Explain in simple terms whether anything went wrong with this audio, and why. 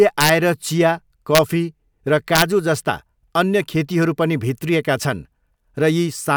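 Three sharp, violent cracks break into the speech on loud moments: from 0.21 to 0.29 s, from 1.35 to 1.38 s, and from 2.36 to 2.42 s. They sound harsher than ordinary distortion. This is integer overflow. The loudest peaks went past the biggest number the system could store, and instead of being held at that ceiling they wrapped around to the opposite extreme, flipping the waveform from one side to the other.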